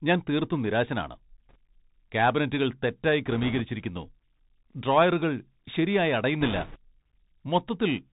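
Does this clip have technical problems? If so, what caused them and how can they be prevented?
Yes. The whole recording has passed through the Bluetooth CVSD headset codec. The sound is plainly damaged by it, which fits CVSD at 64 kbps. This codec sends one bit per sample, saying only up or down, and the step size adapts. Nothing above 4 kHz survives. Loud high sounds outrun the step and distort. S sounds turn scratchy, and a grainy hiss sits under the speech. To prevent it, record through a wideband headset profile or a wired microphone instead.

There are also bit errors on a Bluetooth voice link, heard as brief rushing crackle. The first runs from 1.49 to 1.56 s, just after "ഞാൻ തീർത്തും നിരാശനാണ്" and before "ക്യാബിനറ്റുകൾ തെറ്റായി". The second runs from 3.26 to 3.61 s, after "ക്യാബിനറ്റുകൾ തെറ്റായി". The third runs from 6.41 to 6.77 s, after "ഡ്രോയറുകൾ ശരിയായി", and is rougher. Flipped bits each nudge the waveform only slightly, so there are no sharp clicks. 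The first two fit an error rate of about 2 percent, and the third about double that. To prevent them, keep the headset close to the receiver and away from interference.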